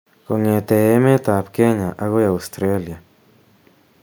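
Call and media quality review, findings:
No faults found in the speech recording. No dropouts, distortion, level problems or timing defects were detected at any point.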